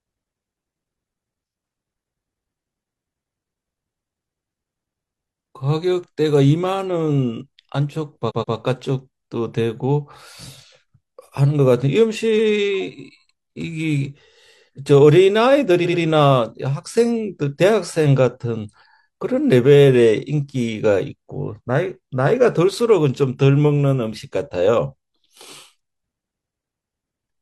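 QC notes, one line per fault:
8.26–8.51 s, repeated frames: a 128 ms stretch plays twice more, adding 256 ms. The decoder is fed the same compressed frames again, so the sound snaps back and restarts, heard as a triple stutter.
12.35–12.48 s, repeated frames: same 128 ms block repeated once, 128 ms added, a single quick hiccup.
15.81–15.98 s, repeated frames: a shorter 85 ms block plays two extra times, adding 171 ms. It's a tighter, faster stutter.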